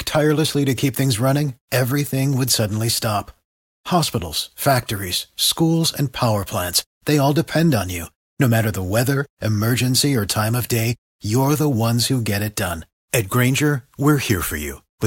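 No technical faults can be heard anywhere in the speech recording; the signal stays continuous and steady throughout.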